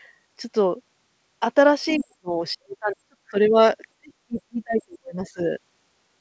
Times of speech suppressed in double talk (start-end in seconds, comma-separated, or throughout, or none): 1.97-3.36, 3.98-5.40